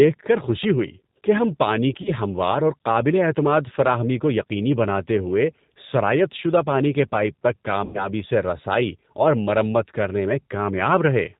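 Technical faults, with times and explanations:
Throughout, G.729 codec: a low-rate speech coder, consistent with about 8 kbit/s, rebuilds the speech from a filter and sparse pulses, so it sounds band-limited below 4 kHz, rough and synthetic.
2.02–2.12 s and 7.85–8.09 s, VoIP packet loss concealed by the speech codec: the decoder filled about 30 ms and then about 90 ms of missing audio, the second gap likely from three lost packets. It extended the last pitch into a fading buzzy tone or coloured noise, and the voice stays weak or distorted for a moment after packets resume.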